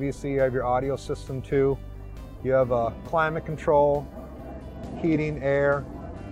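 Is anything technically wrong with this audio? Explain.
Yes. From 4.51 s to the end of the clip at 6.31 s there is a Bluetooth SBC bit pool drop. The link apparently became congested, and the encoder cut its bit allocation sharply. The degradation fits a fall from a bit pool of around 31 to about 13, near 94 kbps. With so few bits, the upper sub-bands are starved and the remaining bands are coarsely quantised. The treble turns dull and a gritty noise appears, and neither recovers before the audio ends.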